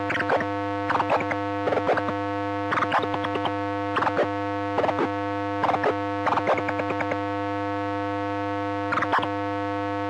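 Listening to these everyday sounds, nothing stood out as a technical problem at any point.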